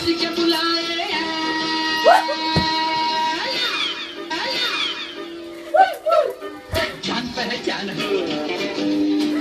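At 4.30 s there's a stream segment repeated: the player fetched or queued the same chunk twice, so about 1.0 s of audio plays through and then plays again, running to 5.30 s. You'll catch a small blip right at the jump back where the second copy butts up against the first, and everything after it lands a second later than it should.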